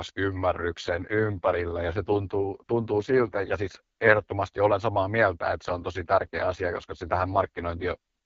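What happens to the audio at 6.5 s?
At 6.5 s the speech is inside an AMR rate drop running from 5.65 s to 7.97 s. The codec steps down to a lower mode, and the rough, synthetic texture fits a fall from 12.65 to 6.6 kbit/s, with bits shifted to error protection. The voice sounds raspy and rough. On a spectrogram the bandwidth stays the same but harmonics smear into noise. The waveform shows no gap.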